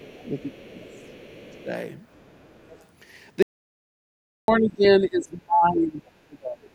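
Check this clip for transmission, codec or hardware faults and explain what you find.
Three faults stand out in this speech clip: echo leakage, suppression of the talker during double talk, and a dropout to digital silence.

Other side's voice leaking through, from 0.04 to 0.54 s, 0.92 to 1.56 s and 2.14 to 2.85 s: a faint second voice sits roughly 30 to 35 dB under the talker. The likely cause is an echo canceller leaving residual loudspeaker sound. On a spectrogram it shows as weak, separate harmonic traces beneath the main speech.

Speech suppressed in double talk, at 0.3 to 1.12 s, 1.56 to 1.71 s, 4.59 to 4.84 s, 5.01 to 6.05 s and 6.21 to 6.68 s: the talker dips by about 10 to 15 dB early on and by about 30 dB near the end. This likely comes from the canceller attenuating everything while both sides spoke. The waveform envelope sags.

Audio dropout to silence, from 3.43 to 4.48 s: the sound cuts off completely for 1.06 s, with no room tone, then resumes mid-flow. 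This is likely lost input with silence written in its place. The waveform shows a flat line, and the spectrogram shows a blank vertical band.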